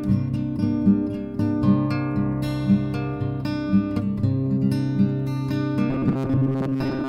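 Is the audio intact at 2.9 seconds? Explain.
Yes, the music at 2.9 seconds plays through intact, with no dropout, click, distortion or other fault at that moment.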